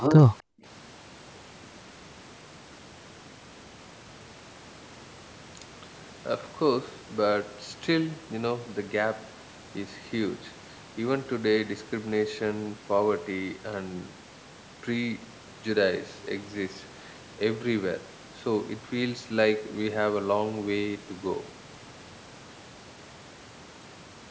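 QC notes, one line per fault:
0.00–0.16 s, echo leak: a separate delayed copy of the speech trails it by about 290 ms at around 10 dB below, likely loudspeaker sound the far end's echo canceller failed to remove. Unlike room reverb, it is a discrete repeat, not a smooth decay.
0.41–0.65 s, speech suppressed in double talk: the speech dips away in pieces, by around 40 dB at its deepest, over about a fifth of a second in total. The likely cause is the echo canceller turning down both overlapping talkers. Unlike a packet dropout, the level is pulled down by processing, not lost in transmission.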